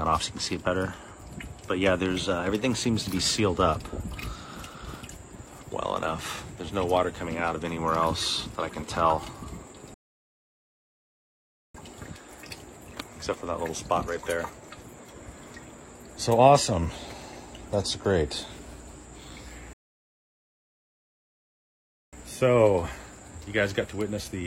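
At 9.94 s the audio cuts to silence for about 1.8 s, resuming at 11.75 s, and at 19.73 s it stops again for about 2.4 s before continuing at 22.13 s. Both are rebuffering stalls: the player exhausted its downloaded audio and waited for more data. Unlike a dropout, nothing is skipped. The sound picks up exactly where it halted, so the gaps add time rather than removing content.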